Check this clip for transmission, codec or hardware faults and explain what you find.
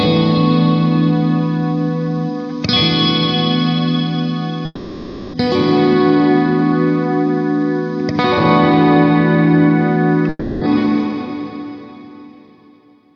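Two breaks in the audio, at 4.65 to 5.35 s and 10.29 to 10.63 s, likely come from a long network dropout. The receiver papered over 0.68 s and 0.32 s of missing audio by extending the last sound as a fading buzz. Each ends in a brief silence, and the sound returns with that stretch lost.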